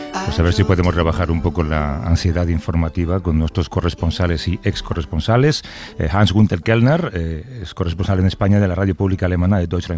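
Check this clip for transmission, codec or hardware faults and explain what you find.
Nothing here points to a transmission, codec or hardware problem, so there's no fault to report in this one.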